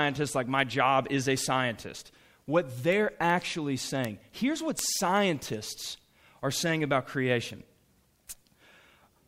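From 0.31 s to the end, word clock ticks recur roughly every 0.4 s. An unlocked receiver slips one sample, giving sharp clicks that show as thin vertical spectrogram lines.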